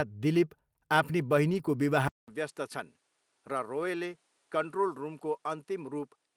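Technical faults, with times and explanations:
1.49 to 1.59 s, lost packet rebuilt from error correction: a brief rough, noisy patch with no gap, where three lost packets were replaced by the low-bitrate copies carried in the packets that followed them, which rebuilt about 60 ms of sound at reduced quality.
2.08 s to the end, input switched to a poorer device: after a 200 ms silence the sound turns duller and about 5 dB quieter, with nothing above 11.6 kHz and a background hiss roughly 40 dB under the signal, likely from the input moving to a lesser microphone.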